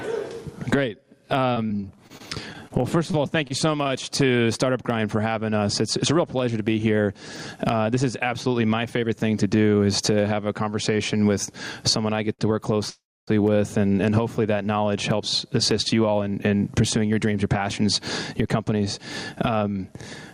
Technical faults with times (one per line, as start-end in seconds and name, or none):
0.00-20.34 gain pumping
1.53-3.91 repeated packet loss (robotic sound)
12.33-12.41 short stall from a late packet
12.90-13.29 call audio freeze
15.72-19.93 jitter buffer speed-up